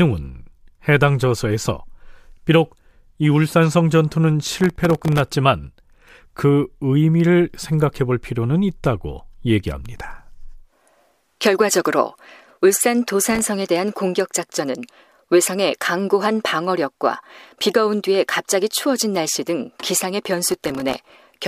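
Gritty crackle tears through the speech from 4.46 to 5.32 s, 13.24 to 13.49 s and 20.50 to 21.14 s. This is processor overload crackle: tiny buffers of well under a millisecond repeatedly missed their deadlines, each leaving a hard-edged sliver of silence.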